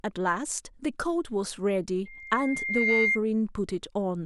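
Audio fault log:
2.05 to 3.20 s, loudspeaker feedback squeal: a 2.1 kHz tone swells over about a second to roughly 5 dB above the speech, as the mic-speaker loop gain exceeds unity.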